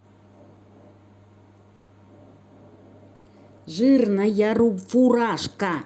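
Speech with two call audio freezes, where the sound stalls into a short fading buzz before picking up again: at 1.75 to 2.06 s with about 130 ms of filler, and at 3.15 to 3.28 s with about 100 ms. Nothing is lost after either stall; the speech simply resumes later than it should. The likely cause is delayed packets emptying the jitter buffer, so the receiver stretched the last sound to bridge each wait.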